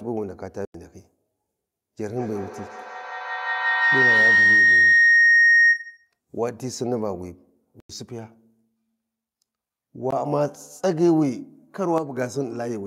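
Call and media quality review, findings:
Block of digital silence at 0.65–0.74 s and 7.80–7.90 s, about 93 ms each (fits a 4096-sample buffer), plus an 18.7 ms hole at 10.11 s. Output buffer underrun.

Feedback howl, 2.17–6.13 s. Tone around 2 kHz, pulsing roughly every 150 ms, peaking about 7 dB above speech. Acoustic loop between two co-located devices gaining each pass.

Sudden gain jump, 11.98–12.17 s. Speech and noise floor drop together by about 7 dB, then return. Likely an unramped digital gain step.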